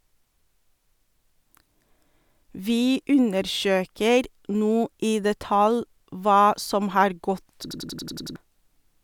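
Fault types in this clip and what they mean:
System hang loop: from 7.71 to 8.36 s the speech freezes into one 93 ms fragment repeated seven times at about 10.8 Hz, a machine-gun stutter, as the stalled system left the hardware cycling a ring buffer that fits 4096 samples, losing roughly 0.7 s.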